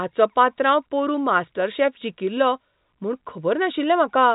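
No faults found; the speech comes through G.711 telephone coding, likely A-law at 64 kbps, with nothing above roughly 3.8 kHz and only faint level-following quantisation noise.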